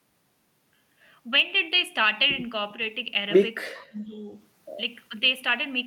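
An echo canceller likely treated simultaneous talk from both ends as echo and turned everything down, giving speech suppressed in double talk. From 3.89 to 4.29 s the speech sinks, falling by about 20 dB at its deepest. From 5.09 to 5.14 s a brief, shallow dip of about 5 dB follows.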